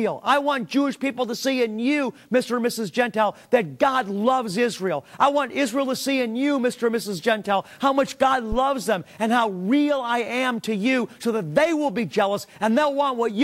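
At 8.52 s a phantom power thump appears. A supply was switched on a live input, and the voltage step passed through the coupling capacitors. It is heard as a deep thump, peaking at about -16 dBFS and decaying within roughly 12 ms, ending by 8.58 s.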